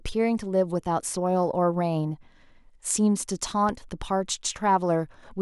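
At 3.69 to 3.73 s a single sharp loud pop cuts through the speech, peaking a few decibels above it for under 40 ms while the talking carries on underneath. It is likely a voltage spike from a plug, switch, static discharge or driver glitch, shaped by the following circuitry.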